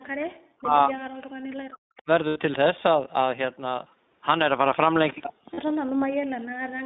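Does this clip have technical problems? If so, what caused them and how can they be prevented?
Yes. The speech has the iLBC codec sound throughout. It is band-limited to roughly 200 Hz to 3.7 kHz and plainly rough and synthetic. Use a wideband codec to prevent this.

Speech suppressed in double talk cuts the voice by about 40 dB from 0 to 1.03 s, 1.34 to 2.08 s, 5.13 to 5.38 s, and 5.75 s to the end. The likely cause is an echo canceller muting both talkers while they overlap. A full-duplex echo canceller with better double-talk detection would prevent it.

Echo leak adds a faint delayed copy at 1.97 to 2.02 s and 5.08 to 5.13 s. It trails by 223 ms, about 30 dB and 20 dB below the speech. Residual loudspeaker echo was likely sent back. A headset or stronger echo cancellation would stop it.

Lost iLBC frames cause brief buzzy, held-vowel patches at 2.28 to 2.38 s (80 ms) and 5.54 to 5.59 s (40 ms). 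The decoder repeated the last pitch cycle, and these lengths fit about four and two 20 ms frames. Speech recovers at once. A steadier network path or forward error correction would prevent this.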